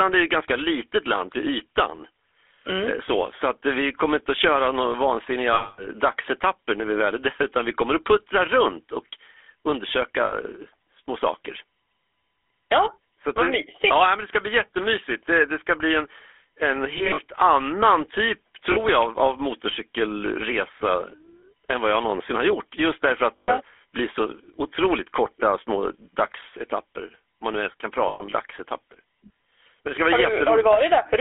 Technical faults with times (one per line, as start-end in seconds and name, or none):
0.00-31.21 GSM full-rate codec
5.54-5.86 lost GSM frames
10.26-10.33 lost GSM frames
16.98-17.19 lost GSM frames
18.72-18.78 lost GSM frames
23.36-23.50 lost GSM frames
28.08-28.33 lost GSM frames